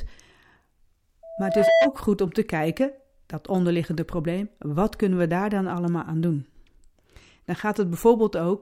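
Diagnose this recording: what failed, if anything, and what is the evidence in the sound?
A pure tone at 659 Hz swells over about half a second from 1.23 s, rises somewhat above the speech, and cuts off at 1.94 s, just before "goed om te kijken". This is loudspeaker feedback squeal in the analogue acoustic path: the microphone picks up its own loudspeaker, loop gain exceeds one at 659 Hz, and that tone builds until the loop is broken.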